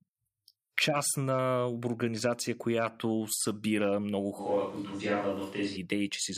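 At 4.41 s, right after "организация която събира много", the speech turns roomy and hollow until 5.76 s, likely a switch to a distant microphone. The level barely changes, but bass thins, reverb tails smear across gaps, and a noise floor roughly 30 dB below the speech appears on the spectrogram.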